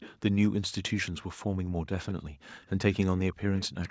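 Echo leak, 0.00–0.16 s and 1.07–1.11 s: a faint delayed copy of the speech trails it by about 227 ms, then 191 ms, at roughly 20 dB down. This is likely a far-end speakerphone whose echo canceller let part of the loudspeaker pickup return.

Background gated by the echo canceller, 1.45–1.89 s: the room tone drops by up to about 40 dB for almost half a second as the canceller clamps the microphone during playback. It recovers once the canceller releases.

The same echo, again at 191 ms, returns at 2.09–2.14 s. The background dips once more at 2.30–2.42 s, a brief drop of about 40 dB. Echo reappears at 2.94–3.06 s and 3.57–3.91 s, quieter, around 25 dB below the speech.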